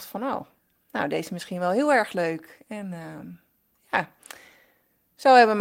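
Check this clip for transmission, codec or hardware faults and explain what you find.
Listening through the speech, nothing stands out as a fault, so there's nothing to flag here.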